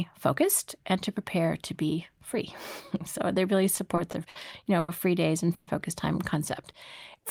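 In this speech recording, packets repeatedly arrived late between 3.75 and 4.37 s, just after "so they really", so the jitter buffer kept running dry. Four short stalls, the longest 60 ms and 120 ms in total, were covered by extending the preceding sound. The result is repeated stalls (stutter) that drag the passage without losing anything. At 4.79 s, right after "you know", a single packet missed its slot and delay jumped by 90 ms. The receiver stretched the last sound for 90 ms until the packet turned up, then resumed, giving a short stall from a late packet that holds a sound too long with a slight buzz or dip. At 5.54 to 5.69 s, after "know free days and" and before "focus time", a call audio freeze, likely from packets held up in transit, leaves the final sound continuing as a fading buzz or hiss for 130 ms with no silence before the audio picks up where it stopped, nothing missing.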